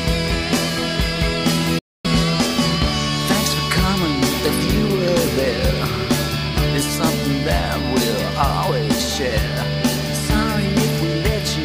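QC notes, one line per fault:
1.79–2.06 s, Bluetooth dropout: the sound cuts abruptly to silence for about a quarter second, then resumes further on as if it had kept playing, likely from late wireless packets being discarded.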